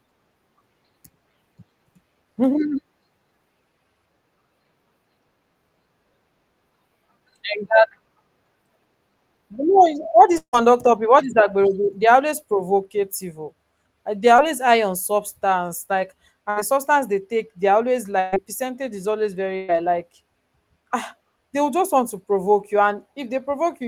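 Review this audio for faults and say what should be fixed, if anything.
Long network dropout, 10.37 to 10.55 s: the speech breaks off and the last sound is stretched into a fading buzz for roughly 150 ms, sinking toward near silence before the speech returns with about 160 ms of it simply gone. The likely cause is that the stream stalled on the network and the receiver had nothing to play, so it extended what it last had. A more stable network path or forward error correction would prevent this.

Short concealed packet loss, 14.37 to 14.40 s: about 20 ms of the speech never arrived in time, and the decoder bridged the hole by carrying the preceding sound forward for roughly 13 ms before blending back into real audio. The result is a quick smear or wobble rather than an obvious gap, though a brief consonant in that spot can disappear. Enabling the codec's in-band redundancy or a slightly deeper jitter buffer would prevent this.

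Burst of packet loss at 16.50 to 16.58 s, 18.20 to 18.34 s and 19.56 to 19.70 s: several consecutive packets were lost, about 60 ms after "high on substance like", and about 120 ms each after "take they are always" and after "percentage is always". Each time the receiver held the last sound as a decaying buzz or hiss, then jumped ahead, so the speech in between is missing. Packet redundancy and a steadier connection would prevent these bursts.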